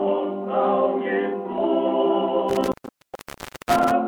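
At 2.49 s there's an intermittent contact fault that runs until about 3.91 s: a loose plug or cable opening up. The sound crackles at the edges and drops out for just under a second (965 ms), leaving faint hiss while the connection's broken.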